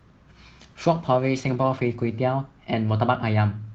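From 0.83 s to 2.19 s a call bitrate drop occurs: the encoder's budget falls sharply, and the coarseness suggests roughly 14 kbps down from about 32 kbps, held for about 1.3 s. The speech turns rough and watery, losing its top end, until the bitrate recovers.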